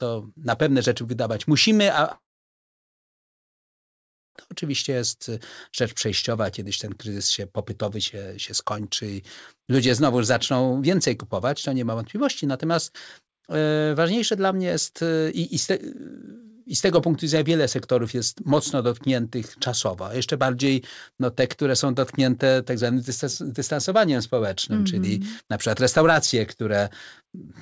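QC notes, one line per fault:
2.12–4.37 s, long network dropout: after "rzeczy wydawać musimy a" a brief fading buzz or hiss gives way to about 2.1 s of silence. Audio likely stopped arriving; speech resumes at "to oczywiście jest rzecz".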